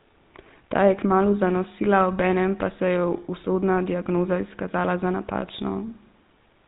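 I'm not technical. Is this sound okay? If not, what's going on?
No. The whole recording has GSM full-rate codec damage, an old mobile-phone format: the speech is dull and buzzy-rough, not merely muffled like a plain telephone line.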